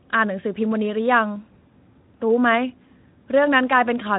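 Nothing here needs fixing: it's a speech recording passed through the Speex codec, and what you'll hear is a sound that tops out around 3.8 kHz, giving it that narrow, phone-like band you'd expect from this kind of path.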